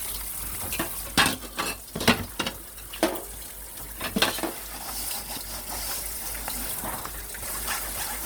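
An everyday-sounds recording with a grainy, rough texture all the way through. Tonal parts turn noisy rather than swirly, though the bandwidth stays full. That points to Opus compression, likely music (CELT) mode at around 24 kbps, filling bands with noise. On top of that there are seven spots where the sound jumps ahead with no gap, at 1.07, 1.96, 2.86, 4.18, 5.38, 6.53 and 7.42 s. Those are dropped buffers (overrun), likely samples overwritten before they were read. The ones at 1.07 and 7.42 s lose roughly 150 ms each, and the rest lose about 40 ms.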